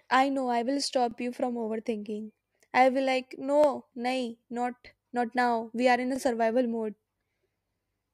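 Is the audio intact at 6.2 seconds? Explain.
No, overlapping chunks cause a fault from 6.16 to 6.18 s, just after "we are in a". The audio was handled in 2.5-second chunks, and here the next chunk begins before the previous one has finished. The same 23 ms of speech therefore plays twice at the join. That brief repeat is heard as a small stutter or click rather than a smooth continuation.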